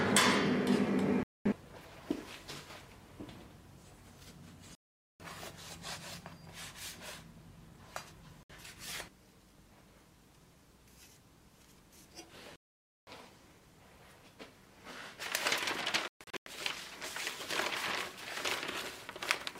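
Digital broadcast dropouts mute the audio at 1.23 to 1.46 s, 4.75 to 5.20 s, 8.43 to 8.50 s, 12.56 to 13.08 s and 16.08 to 16.47 s. Each time, the receiver stopped getting valid frames and muted until clean ones returned. The programme material from those moments is simply gone. The gaps run 64 to 512 ms in 32 ms steps, which fits 32 ms audio frames. The last one breaks up into several short holes over about 384 ms, the longest 128 ms.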